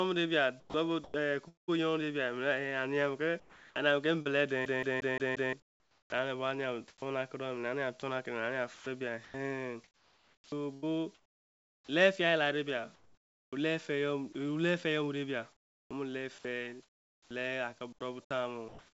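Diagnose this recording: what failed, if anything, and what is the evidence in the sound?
Call processing: sound chopped by the voice detector, likely the sender's voice detector gating transmission. This happens at 0.60–1.70, 3.40–7.02, 8.00–11.89, 12.95–14.35 and 15.53–19.00 s, with up to about 1.75 s replaced by comfort noise. On a spectrogram, speech harmonics cut off abruptly into flat, featureless noise, all below 8 kHz from the G.722 call path.

Storage or playback: a CD stuck on one turn, from 4.65 to 5.53 s. A 0.18 s slice plays five times in a fast, even stutter, with a brief mute at each jump. The waveform shows identical repeating blocks separated by short, regularly spaced gaps.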